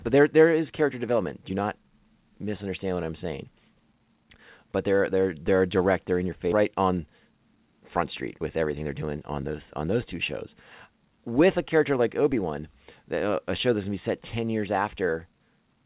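At 5.48 s, just after "they're they're", a DC step shifts the waveform's zero line abruptly, giving a low thump that decays away as a 20 Hz high-pass pulls the offset back. At 6.52 s, after "in your", playback skips ahead: roughly a second of speech is dropped with no fill, so the two sides join directly. From 6.64 to 7.82 s a jitter buffer speed-up runs the speech at 113% with pitch unchanged, trimming about 150 ms of pitch periods and sounding hurried. A second DC step at 12.32 s, after "a character like", produces the same decaying thump. Throughout, the band stops at 4 kHz, which fits a G.711 A-law call path at 64 kbps.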